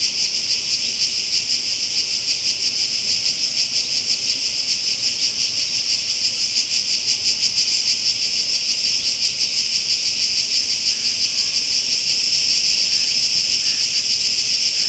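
Nothing is technically wrong with this recording of sounds, which has been through a call's microphone processing and a WebRTC call path with nothing above 8 kHz.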